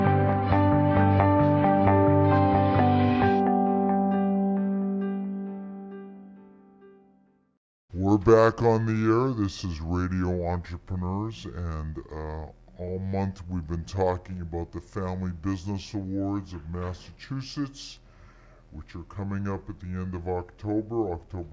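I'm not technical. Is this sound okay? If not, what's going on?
No. From start to finish it has a wrong sample rate: playing at two-thirds speed, about 7 semitones lower, which fits 24 kHz audio played at 16 kHz.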